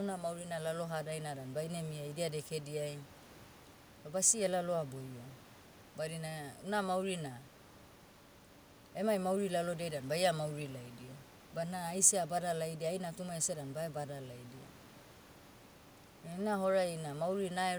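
No technical fault can be heard anywhere in the recording; the speech signal holds together without any audible break, distortion or disturbance.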